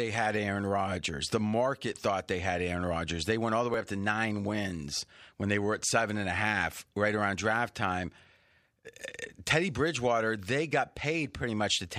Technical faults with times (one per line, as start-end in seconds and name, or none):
1.93 dropped buffer (overrun)
3.74 dropped buffer (overrun)